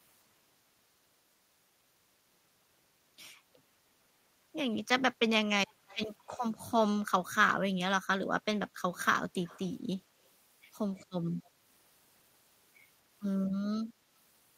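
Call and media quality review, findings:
Echo leak at 5.67–6.08 s, 6.29–6.42 s and 9.44–9.74 s: faint delayed copy of speech, 200 ms behind, very low level, around 25 to 30 dB down. Likely far-end echo canceller letting loudspeaker pickup through. Spectrogram: ghost harmonics trailing the originals.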